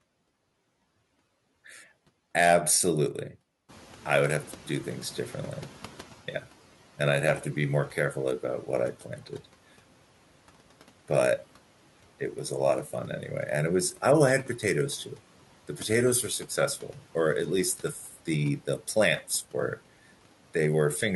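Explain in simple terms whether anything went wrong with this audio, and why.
Two things went wrong, both caused by the noise suppressor, the processing meant to strip out background noise.

The first is the noise suppressor catching up. At about 3.5 s the room noise jumps up sharply, and the suppressor's picture of what counts as noise is still based on the quieter room. From 3.68 s to 6.16 s, roughly two and a half seconds, the noise comes through louder than it should, then gradually sinks as the suppressor adjusts to the new level.

The second is speech cut by the noise suppressor, which happens twice: from 9.17 s to 9.41 s and from 18.07 s to 18.27 s. Each time, the suppressor mistakes a brief stretch of speech, about a tenth of a second, for background noise and turns it down along with the noise. Those moments sound swallowed or faint. The dip at 18.07 s is deeper than the one at 9.17 s.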